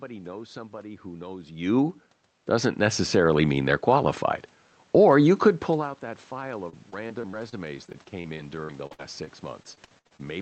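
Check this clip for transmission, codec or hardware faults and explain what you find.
Two faults stand out: a gain swell early on and a long stretch of robotic, broken-up sound near the end, heard through a call codec whose coding noise and roughly 8 kHz top edge fit Opus at around 32 kbps.

Automatic gain rising, from 2.47 to 4.25 s, just after "somebody who knows you": the automatic gain control judged the input too quiet and lifted it by about 4 dB. Voice and room noise rise together, showing as a slowly widening waveform envelope and a brightening noise floor.

Repeated packet loss (robotic sound), from 6.69 to 10.21 s, after "pull out that file": packets kept going missing, each hole patched by extending the last sound, up to 65 ms at a time. It sounds choppy and robotic, with smeared, repeated spectrogram frames and brief waveform dropouts.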